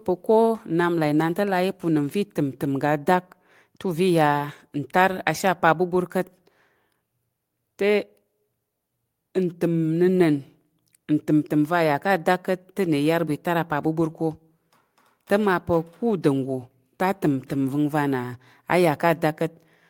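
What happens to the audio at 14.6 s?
Nothing goes wrong at 14.6 s; the speech carries on intact through that moment with no audible fault.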